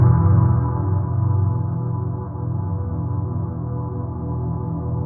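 No technical faults are audible anywhere in this recording.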